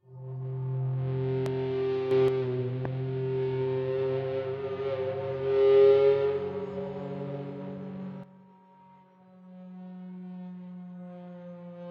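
At 1.46 to 1.48 s a loud pop sits on top of the sound, a single sharp thump peaking around 15 dB above the surrounding level while the sound continues underneath. A brief electrical step or pulse, likely from a switch, static discharge or a driver glitch, entered the signal chain and was shaped by the following circuits into a short transient.

From 2.11 to 2.28 s there is a sudden gain jump: the sound and its background noise rise together by about 6 dB in one step, then drop back. This is likely a digital gain setting applied instantly, with no ramp.

A second loud pop, again a single thump around 15 dB above the sound, occurs at 2.85 to 2.87 s and has the same likely origin as the first.

At 8.24 s another sudden gain jump drops the level by about 12 dB and holds it there to the end. Sound and noise floor fall together in a single abrupt step, most likely from a gain change or bit shift applied without any smoothing.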